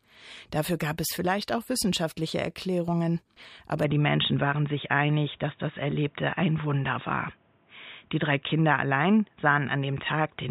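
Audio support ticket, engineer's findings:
From 3.84 s to end: sound turns abruptly dull, nothing above 3.8 kHz. No gap. Level shifts about 5 dB, faint new noise floor. Likely input switched to a poorer device.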